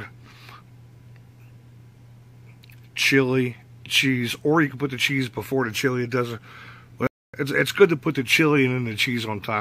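Late in the clip, at 7.07 s, the sound cuts out abruptly in mid-flow and stays silent for about 0.27 s before resuming at 7.34 s. This is a playback stall: the output went dead for roughly a quarter of a second rather than fading or glitching. The likely cause is that the player ran short of data or its playback thread was briefly blocked, leaving nothing to send to the output until it recovered.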